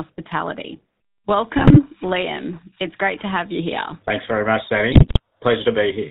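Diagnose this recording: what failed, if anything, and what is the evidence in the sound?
The whole clip carries the sound of the GSM full-rate codec. That's a codec-stage problem. The speech has that buzzy, gravelly roughness and nothing above 4 kHz. It fits a 13 kbps full-rate link, where the vocal tract is modelled as a filter and driven by a sparse pulse train that keeps only every third excitation sample. The damage is plainly audible, and it's worst where the voice sits higher.

There are also GSM bit errors, which points to the network stage, a weak radio link feeding corrupted bits into the decoder. You get squawky, gargling breakups from 1.58 to 1.8 s, and again from 4.92 to 5.2 s right after "very much", and the second one's nastier. Flipped bits in the filter, pitch or gain parameters warp the spectrum or spike the level frame by frame. The second burst sounds like it's hitting a good run of frames.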